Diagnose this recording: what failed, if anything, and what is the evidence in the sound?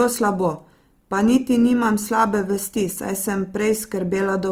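Codec stage. Throughout, the speech sounds grainy and rough rather than swirly, yet still reaches 20.2 kHz. This is likely Opus compression in CELT mode at about 24 kbps.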